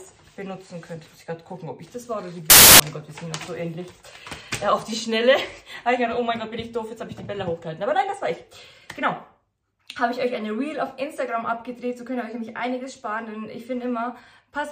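From 2.50 to 2.80 s the samples are built from the wrong bytes, so the jittery low bits dominate and you get a burst of loud, harsh broadband noise.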